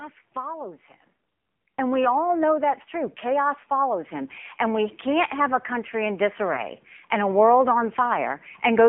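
From start to finish the speech carries the AMR narrowband mobile codec. The band is held between 150 Hz and 3.5 kHz, and the voice has a buzzy, synthetic edge from a vocal-tract model rebuilding each frame from a few pulses. The coarseness fits a low mode of about 7.4 kbps. A plain band-limited line would sound muffled but natural. Here the damage is in the voice's texture itself and is plainly audible.

At 0.62 s comes the first instance of lost AMR speech frames. The disturbance runs to about 0.71 s and matches a single lost 20 ms frame. The decoder fills the gap by reusing the previous pitch and spectral settings at falling gain, so the sound smears into a short warbling dip before recovering. The same thing happens from 6.54 s to about 6.64 s. Unlike a hard dropout or click, neither event cuts to silence. Each is a soft, synthetic stretch of the preceding sound.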